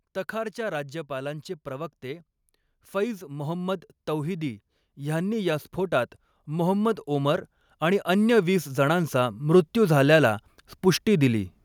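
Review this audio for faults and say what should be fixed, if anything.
Automatic gain rising twice: the gain control judged the input too quiet and ramped up, about 5 dB from 2.91 to 5.71 s and about 8 dB from 6.32 to 10.43 s, swelling speech and background together. Fix it by setting a proper input level and slowing or capping the automatic gain control.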